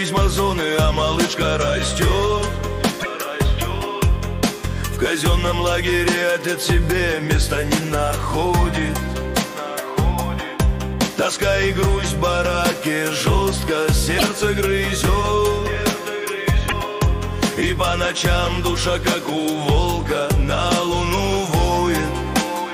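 Short chirps, noise bursts or brief holes jump the audio forward at 2.99 s, 14.17 s and 16.68 s, each lasting 40 to 70 ms, about two frames of roughly 26 ms. The likely cause is a broken MP3 bit reservoir: frames borrowing earlier data decode garbage after a cut.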